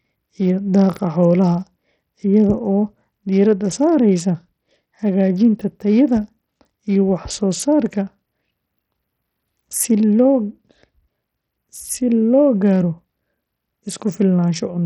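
Throughout the speech, the treble drops out and flickers, and a gritty noise with aliasing rides on the sound. The likely cause is heavy Bluetooth SBC compression: a small bit pool starves the top sub-bands and coarsely quantises the rest, which points to a bitrate near 64 kbps.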